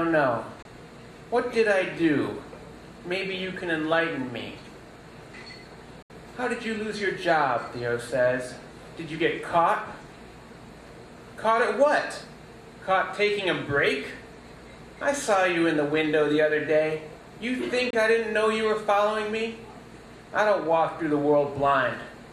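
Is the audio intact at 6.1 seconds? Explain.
No. A digital broadcast dropout runs from 6.02 to 6.10 seconds. The receiver stopped getting valid frames and muted until good ones returned. The sound fades out within about 3 ms, leaving a hole of about 72 ms, which fits a few lost frames. Whatever was sent during that gap is gone.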